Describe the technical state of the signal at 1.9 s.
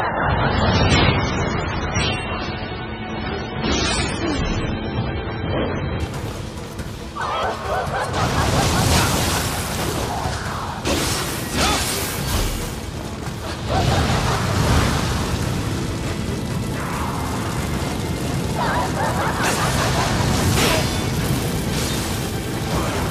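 At 1.9 s the sound is dull and smeared, with nothing above about 9.5 kHz and strong codec artefacts. This is an adaptive stream starting at a low bitrate: from 0.0 to 6.0 s the player runs a heavily compressed version, which points to MP3 near 16 kbit/s, before switching without a gap to a much cleaner one, around 128 kbit/s.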